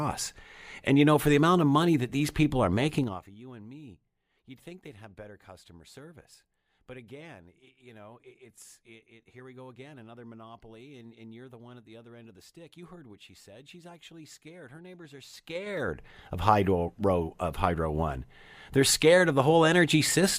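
From 2.96 to 3.34 s, right after "that these people are" and before "you and me you'd", a gain change of roughly 20 dB downward is applied in unsmoothed 3 dB jumps, about twenty per second, producing zipper noise: each jump lands as a small click, so the fade ticks audibly. From 15.28 to 16.1 s, after "neighbors are", the same stepped gain rises by roughly 20 dB at about ten steps per second, giving a slower zipping tick.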